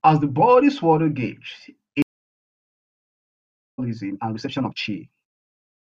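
At 2.02 s the speech drops out for about 1.76 s, until 3.79 s. That's a stream reconnect: the connection broke, the player sat silent, then rejoined with a fresh decoder mid-stream, picking up about a second and a half further on, so that stretch is simply gone.

From 4.04 s to the end, the pace jumps to about 1.62 times normal while the pitch holds steady. The rushed feel points to a time-stretched section, likely software squeezing the audio to fit a length by dropping short pieces.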